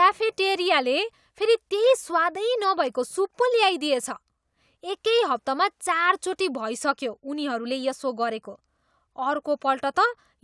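Nothing here sounds wrong: the speech runs along without any technical fault turning up anywhere.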